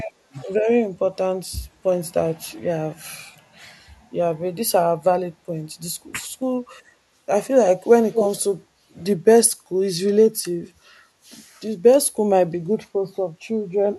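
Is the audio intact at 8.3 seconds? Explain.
No. An echo leak runs from 8.13 to 8.28 s: a far-end echo canceller likely failed, sending back a copy of the speech delayed by 159 ms and roughly as loud as the original.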